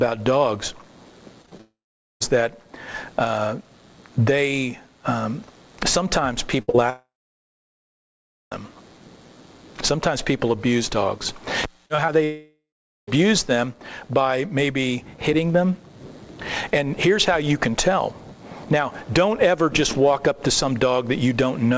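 The audio passes through a call path band-limited at 8 kHz, which fits a G.722 wideband codec at 64 kbps, and it shows network faults. Repeated packet loss (robotic sound) runs from 1.42 to 1.61 s: four gaps of up to 20 ms patched by continuing the last sound, leaving a choppy texture. Long network dropouts, likely from the network delivering no packets for extended stretches, occur at 1.61–2.22 s, 6.90–8.53 s and 12.24–13.09 s. In each, concealment fades into silence lasting about 0.45 s, 1.4 s and 0.43 s, and the audio resumes without the lost 0.6 s, 1.62 s and 0.84 s. A burst of packet loss at 6.62–6.70 s drops 60 ms, heard as a held, fading extrapolation before playback jumps ahead. Short concealed packet loss immediately follows at 6.70–6.76 s, where 40 ms is filled by continuation, giving a brief smear. Scattered short gaps between 11.86 and 13.2 s cause roughly four isolated losses, the longest around 40 ms, heard as small ticks and hiccups.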